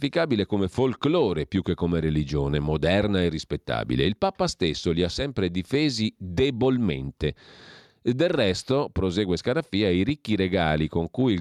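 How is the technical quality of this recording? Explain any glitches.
No glitches or faults heard.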